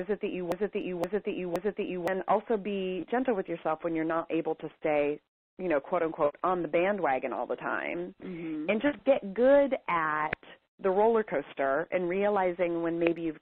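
From the very start until 2.08 s, the audio is stuck in a broken-record loop. It is already under way when the clip begins. A fragment of about 0.52 s plays, then plays again, exactly the same, back to back. It repeats three times. No new sound gets through during this stretch, so whatever belonged there is missing. The likely cause is a stalled player, encoder or stream resending the last fragment it held.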